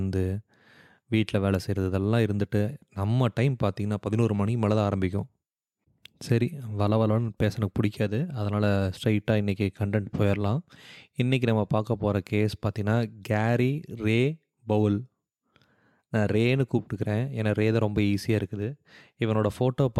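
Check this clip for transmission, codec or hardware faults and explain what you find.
Nothing faulty can be heard anywhere in this recording.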